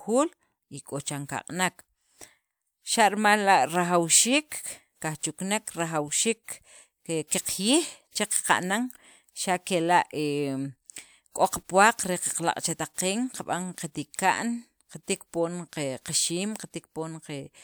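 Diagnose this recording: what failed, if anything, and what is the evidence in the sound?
Nothing failed in this speech recording that can be heard. The sound gives no sign of trouble at any stage, from wiring and conversion through processing, transmission, storage and playback.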